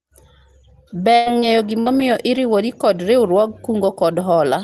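At 1.15 s a burst of packet loss opens a gap of about 100 ms, lasting to 1.29 s. The receiver continues the last speech sound, fading it down, and then jumps ahead. Unlike a short concealment, a whole stretch of speech is missing. Near its end, from 1.26 to 1.28 s, a lost packet is rebuilt from error correction. That 20 ms frame comes from the low-bitrate copy carried in the next packet, so it plays without a gap but sounds rougher and noisier than its neighbours. At 1.40 s a short concealed packet loss of about 20 ms leaves only a brief smear that blends back in by 1.45 s. It is much shorter than the bursts. Inside it, 1.42 to 1.44 s is again a rough error-correction rebuild. At 1.80 s a second burst of packet loss drops about 60 ms and ends at 1.89 s with the same held, decaying sound. A final 20 ms rebuilt frame falls within it at 1.86 to 1.88 s, coloured by the Opus codec's coding noise at 32 kbps with a top near 12 kHz.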